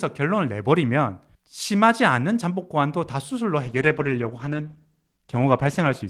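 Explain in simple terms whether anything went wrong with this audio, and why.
At 3.65 s a call bitrate drop sets in. The connection's capacity estimate fell, so the encoder sharply cut the data spent on the speech. It codes coarsely, making the sound rougher, and stays at its lowest for about 2.3 seconds, until the clip ends.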